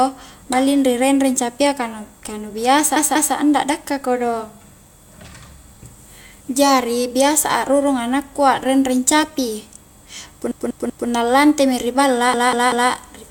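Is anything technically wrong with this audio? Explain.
Yes. Repeated frames at 2.96–3.34 s (just before "anda dakka kodong"), 10.51–11.09 s and 12.34–12.91 s: a 192 ms block of compressed speech replays two or three extra times, stuttering. Unlike an echo, it's an exact, full-level repeat that lengthens the audio.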